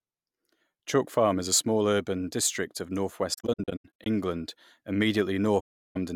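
After "small urban district of", AAC frame loss with muting leaves soft-edged gaps between 3.33 and 4.06 s, about 0.41 s of silence scattered across that span, the longest around a tenth of a second. A second dropout runs from 5.60 to 5.97 s. The decoder zeroes each missing frame, and window overlap fades sound out and back in.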